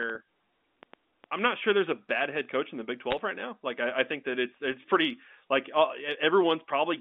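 From 0.03 to 1.40 s, a train of clicks runs at an irregular 3.7 per second, roughly seven sharp pops peaking about 10 dB above the speech, likely interference or a struggling interface. Between 3.11 and 3.19 s, bit errors on a digital phone line corrupt single samples on the G.711 A-law path, producing a brief burst of crackle that points to a handful of damaged frames.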